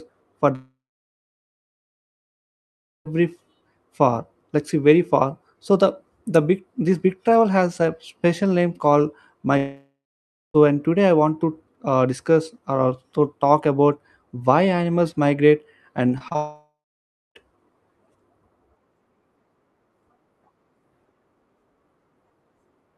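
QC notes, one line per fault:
0.55–3.07 s, long network dropout: the sound smears into a fading buzz, then about 2.3 s of near-silence before the audio resumes with the gap's content gone. This is likely a stalled stream, with the receiver extending the last sound until it gave up.
9.57–10.56 s, long network dropout: a brief fading continuation, then roughly 0.6 s of quiet, and the audio picks up further along with about 1 s missing. This is likely the connection stalling while the receiver filled in briefly before going silent.
16.18, 16.28 and 16.32–16.36 s, short concealed packet loss: three quick smears or wobbles, each covering a 20 ms gap. The receiver bridged each hole by continuing the preceding sound, then blended back into the real audio, and a short consonant may be swallowed.
16.36–17.37 s, long network dropout: straight after those smears the sound trails off into about 0.6 s of silence, and roughly 1 s is skipped. 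The likely cause is the same unstable link failing outright, with concealment running out and leaving a gap. The call path's Opus coding, with its top near 12 kHz, applies throughout.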